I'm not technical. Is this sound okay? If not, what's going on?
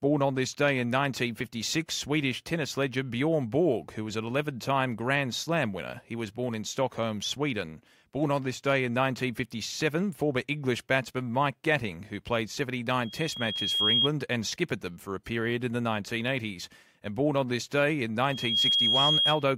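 No. A microphone is picking up the loudspeaker it feeds, so the sound loops round and builds on itself. This is loudspeaker feedback squeal, a piercing whistle at about 3.3 kHz. It starts at 12.99 s, right after "who played", swells for about a second, and stops at 14.09 s before "and skippered them for". It returns at 18.22 s after "on this day in", rising faster, in under half a second, until 19.49 s.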